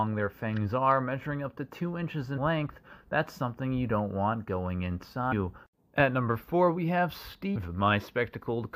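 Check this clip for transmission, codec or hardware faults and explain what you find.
The clip has damaged data in a compressed stream, heard as three short events: at 2.37 s, from 5.31 to 5.33 s, and at 7.55 s. In each, part of the compressed data is corrupt, so the decoder misreads those frames, loses sync and must find the next frame header. The result is a brief chirp, squawk, click or short hole lasting a couple of hundredths of a second.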